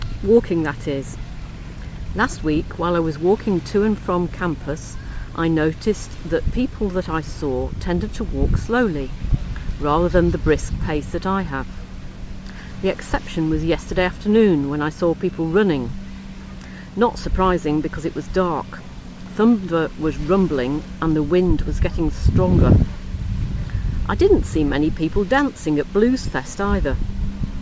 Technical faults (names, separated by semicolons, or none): none